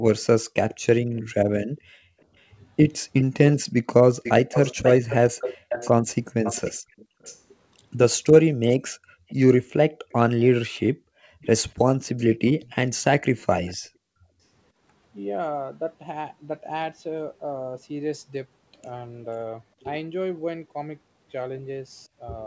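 From 0.17 to 13.74 s an echo leak trails the speech by 490 ms at roughly 10 dB down, likely a far-end loudspeaker echo the canceller failed to remove. Across the clip, background gated by the echo canceller cuts the room sound by about 40 dB at 1.65–2.28, 5.57–7.21, 9.06–11.13 and 13.83–14.28 s, with brief dropouts before the ambience returns. Speech suppressed in double talk appears at 3.26–3.30, 6.33–6.85 and 8.41–8.49 s as short, deep bites out of the voice, likely the canceller ducking the talker while the far side spoke.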